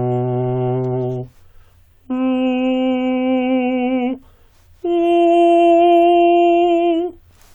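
Nothing in this music recording stood out as a technical problem on listening.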